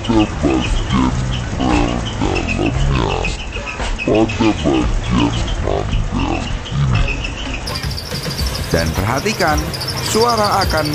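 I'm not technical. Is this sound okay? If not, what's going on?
No. From the start until about 7.66 s, the sound has a section at the wrong speed. It plays at roughly half its proper speed, 0.536 times normal. Because speed and pitch move together, everything also sounds much deeper, nearly an octave lower. It drags and sounds heavy. Right after 7.66 s it snaps back to normal. The likely cause is a player or editing step that ran this part on the wrong clock.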